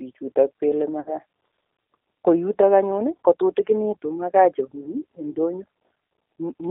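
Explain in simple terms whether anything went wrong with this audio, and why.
Two things went wrong. Throughout the clip, the G.729 codec squeezes the speech into a narrow phone band, roughly 300 Hz to 3.7 kHz, and rebuilds it from a simple voice model. That gives a thin, slightly rough, synthetic texture, not just the muffling a plain filter would cause.

Between 1.00 and 1.13 s there is VoIP packet loss concealed by the speech codec. About 60 ms of sound went missing, and the decoder stretched the last sound into a fading buzzy tone or coloured noise instead of leaving silence or a click. Because each frame builds on the one before, the sound stays weak or smeared briefly after the gap.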